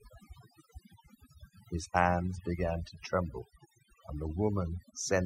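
From start to finish, the speech carries overdone noise removal. The noise reduction was set too aggressively. Frequency bands near the background level are pushed down or cut out, taking quiet parts of the voice with them. Gaps become near silence with twinkling specks.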